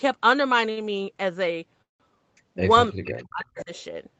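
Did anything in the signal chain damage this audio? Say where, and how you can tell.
Yes. Short stalls from a late packet at 0.71 to 0.79 s (55 ms) and 2.38 to 2.41 s (15 ms) come from the jitter buffer: the last sound is held too long, with nothing lost.

The call audio freeze at 1.82 to 2.02 s is longer: 176 ms, fading to about 150 ms of silence before resuming where it stopped. The likely cause is packets delayed in the network, draining the buffer.

Speech suppressed in double talk from 2.90 to 3.72 s shows the voice dipping in pieces, by as much as roughly 35 dB, over about 0.7 s. This is likely the echo canceller turning down both talkers at once.

Echo leak at 3.05 to 3.24 s and 3.44 to 3.82 s is a copy of the voice arriving about 0.32 s late and about 15 dB quieter. That is likely loudspeaker pickup the far-end canceller missed. Unlike suppression, it adds sound rather than removing it.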